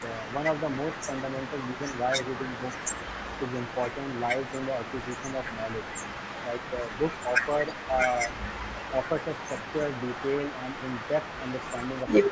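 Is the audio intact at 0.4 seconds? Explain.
No. At 0.4 s an echo leak is present, running through the whole clip from 0.0 to 12.31 s. A faint copy of the speech returns about 311 ms late, well below the direct sound. The likely cause is a far-end echo canceller failing to remove its loudspeaker's output. Unlike room reverberation, it is a distinct, separate repeat at a fixed delay rather than a smooth decay.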